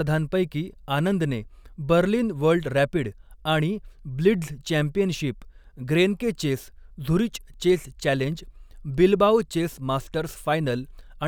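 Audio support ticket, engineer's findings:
Listened to the full speech recording and nothing stood out.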